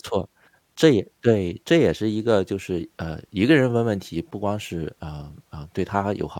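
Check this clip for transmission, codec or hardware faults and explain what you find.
Checking the clip turned up no faults to report.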